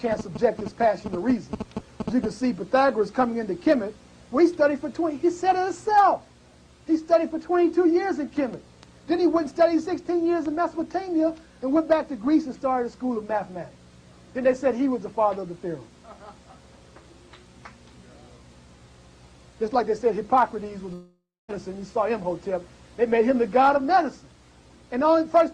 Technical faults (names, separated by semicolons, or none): long network dropout